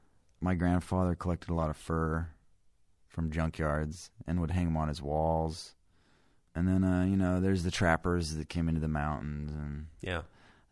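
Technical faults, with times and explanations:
Nothing stood out on listening to this speech recording.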